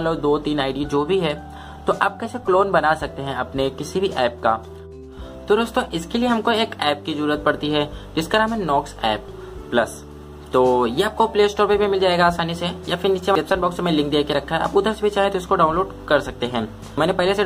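At 13.35 s and again at 16.98 s, the audio shows damaged data in a compressed stream. A stretch of the encoded bytes is wrong, so the decoder misreads or discards the frames there, loses its place and hunts for the next valid frame header before carrying on. Each event passes as a brief chirp, squawk, click or short hole.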